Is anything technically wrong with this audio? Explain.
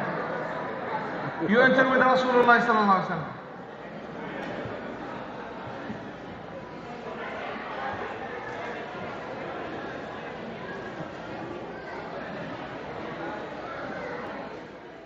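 No, nothing technically wrong can be heard in this audio. Nothing in it points to a problem with how the sound was captured, processed or delivered.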